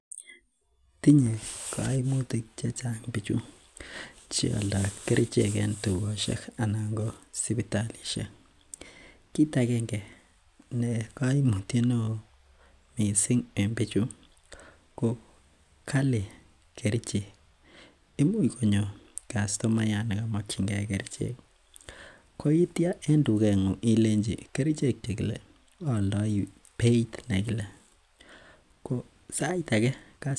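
No technical faults are audible anywhere in this recording.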